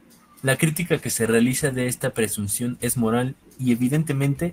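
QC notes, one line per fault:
0.69–3.75 s, call bitrate drop: speech coarsens as the encoder gets far fewer bits, consistent with 32 falling to 14 kbps, roughest for 1.25 s.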